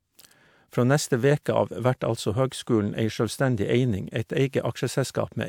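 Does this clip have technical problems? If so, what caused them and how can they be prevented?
No, there are no technical problems in this recording.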